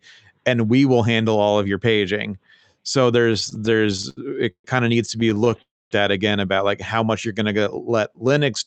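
From 3.33 s to 4.66 s the speech shows repeated stalls (stutter). Packets reached the receiver late or more slowly than playback consumed them, so the jitter buffer emptied 16 times. Each time, the receiver extended the last sound until data arrived. About 348 ms was filled in this way, roughly a quarter of the span, with the longest wait 134 ms. Nothing is lost, but the speech drags and catches. A second stutter runs from 5.20 s to 5.60 s. It has 8 shorter gaps, none longer than 16 ms, which together add 77 ms, about a fifth of that span.

From 5.62 s to 5.93 s the audio stops. The gap is 291 ms long, of which 260 ms is silent, and the speech then resumes where it left off with nothing missing. This is likely a call audio freeze. Packets were held in transit, the jitter buffer ran dry, and the receiver's continuation of the last sound died away to silence. Playback picked up again with 291 ms of extra delay.

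From 7.27 s to 8.65 s there is a jitter buffer slow-down. To rebuild its reserve, the receiver repeated single pitch periods and fragments of pauses, adding 174 ms. The speech plays at about 88% of its normal speed at unchanged pitch, so sounds are drawn out. Throughout, the top end stops at 8 kHz, consistent with Opus at around 32 kbps on the call path.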